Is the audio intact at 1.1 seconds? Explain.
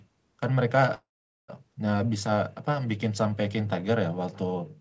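No, 1.1 s falls inside a call audio freeze from 0.94 to 1.50 s, likely from packets stalling and the jitter buffer running dry: a brief fading buzz, then silence, before the speech resumes with nothing lost.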